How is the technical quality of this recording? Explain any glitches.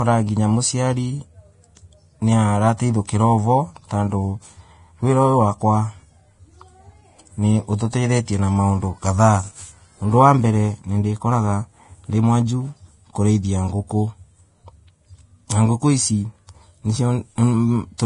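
Technical quality is poor, with heavy lossy-coding damage running through the whole speech recording and one brief smeared attack.

Throughout, the sound has the hissy, grainy texture of heavy Vorbis compression, and it is likely that a low-bitrate Vorbis encode caused it, probably around 30 kbps. Nothing survives above 10.6 kHz, and the treble below that cut-off is quantised so coarsely that fine detail turns into noise-like grain of similar energy. Tones sound roughened and consonant attacks blurred. On a spectrogram this shows as a hard horizontal ceiling at 10.6 kHz with speckled, patchy high bands beneath it.

From 3.07 to 3.09 s there is pre-echo. A sharp onset fell late in a transform block, so quantisation noise sized for that loud moment was spread back across the quiet stretch before it, about 20 ms early. It is heard as a short hiss ahead of the attack, which then sounds softened. 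A waveform shows noise rising just before the transient, and a spectrogram shows a thin broadband smear leading the onset.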